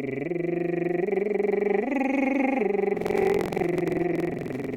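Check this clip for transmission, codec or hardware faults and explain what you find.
One hardware fault is present in this music clip. Buffer tearing runs from 2.93 s to the end. Writer and reader have slipped within the ring buffer, so about half of each period replays audio from roughly a fifth of a second earlier. The resulting hard joins produce a rattling 21.5 Hz buzz, which fits a 2048-sample buffer. A spectrogram shows evenly spaced vertical streaks, and the waveform shows abrupt steps at each join.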